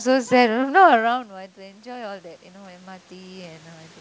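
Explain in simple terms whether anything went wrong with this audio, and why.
Automatic gain rising, from about 1.55 s to the end: after the talker moved away from the microphone around the one-second mark, the level control sensed a quieter input and slowly turned itself up, so the voice and the room noise swell louder together.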